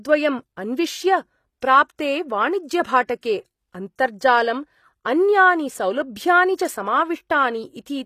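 Throughout, the treble is likely rebuilt by HE-AAC compression, which fits a bitrate near 24 kbps. Copied high bands make sibilants gritty and metallic, with nothing above 14.9 kHz. At 3.07–3.09 s and 3.21–3.23 s, the codec spreads quantisation noise ahead of sharp attacks, causing pre-echo: roughly 20 ms of hiss precedes each attack, softening it.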